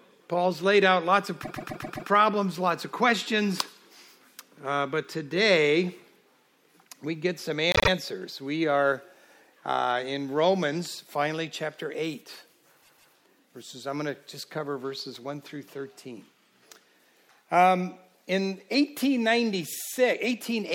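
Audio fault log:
1.43–2.08 s, repeated frames: a 131 ms block of compressed audio is decoded five extra times. This is heard as a stutter, adding 0.65 s.
7.72–7.88 s, repeated frames: a 78 ms block plays twice more. The decoder replays frames that were sent again, causing a brief stutter and 0.16 s of added length.
12.82–13.13 s, repeated frames: a 157 ms block repeats twice. It stutters, and the audio runs 0.31 s longer.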